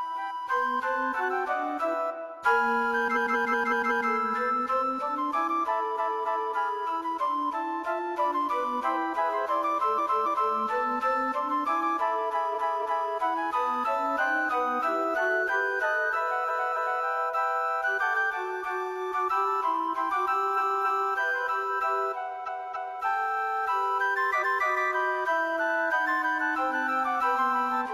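Repeated frames: a run of compressed frames was sent more than once, so the decoder plays the same block again. At 3.12 s a 186 ms block replays five extra times, adding 0.93 s. A 279 ms block then plays three times in all at 5.95, 9.94, 12.50, 16.44, 20.53 and 22.43 s, adding 0.56 s each, and twice at 24.38 s. Each one is heard as a stuttering loop.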